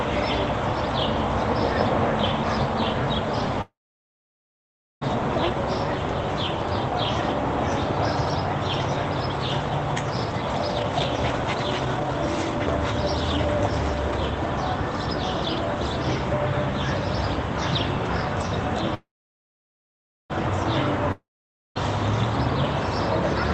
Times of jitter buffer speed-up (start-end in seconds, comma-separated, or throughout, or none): 10.31-11.09, 11.63-12.12